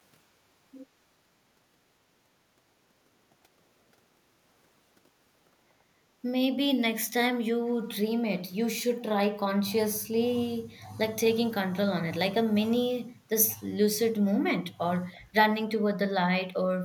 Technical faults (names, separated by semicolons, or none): echo leak